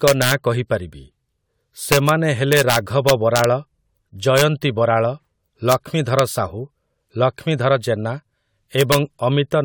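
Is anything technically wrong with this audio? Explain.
Yes. Throughout this speech clip the sound is swirly, smeared and hollow, with soft, blurred attacks and nothing above 20.1 kHz. That points to generation loss, likely from re-encoding about four times with AAC-LC at 96 kbit/s, each pass adding fresh quantisation noise and spectral holes on a shifted frame grid.

There are also violent, sharp cracks from integer overflow at 0.08–0.31 s, 1.92–2.09 s, 2.52–3.44 s, 4.38–4.41 s, 5.72 s, 6.19 s and 8.81–8.95 s. Peaks pushed up to about 4 dB past the integer limit wrap to the opposite sign instead of being limited, so each one flips across the full range, much harsher than clipping.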